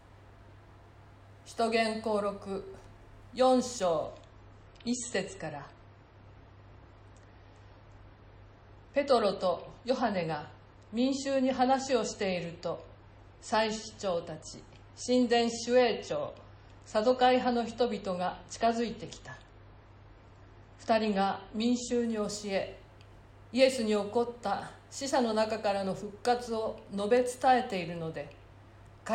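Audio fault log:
4.05–22.05 s: adaptive stream at a lower bitrate. The stream abruptly switches to a much leaner encode, which sounds consistent with MP3 dropping from 128 to 32 kbit/s. Nothing is left above 8.3 kHz, so the top end goes dull and coding artefacts thicken. Quality snaps back at 22.05 s with no gap.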